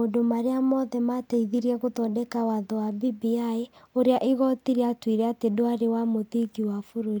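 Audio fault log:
Nothing to log here; I didn't hear anything go wrong anywhere in this bit of speech.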